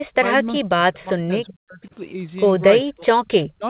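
From 0 to 1.95 s, and again from 2.83 s to the end, the speech drops away in chunks, by about 35 dB and then about 40 dB. That's likely speech suppressed in double talk, the echo canceller ducking the near talker along with the echo.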